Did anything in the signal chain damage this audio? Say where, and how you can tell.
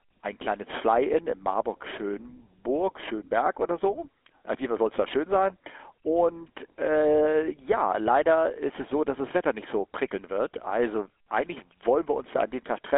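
Yes. The damage comes in at the codec stage, and it's there for the whole clip. This is speech run through the GSM full-rate codec. You can hear the buzzy, gravelly texture that comes from rebuilding the voice off a sparse, regularly spaced pulse excitation. The band is narrow, roughly 250 Hz to 3.5 kHz, and there's nothing above about 3.8 kHz. The roughness is plainly audible, which fits a 13 kbps full-rate link.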